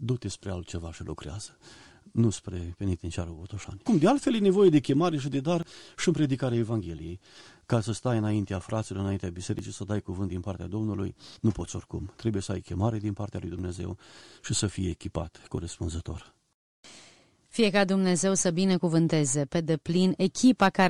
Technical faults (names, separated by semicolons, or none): overlap between stream segments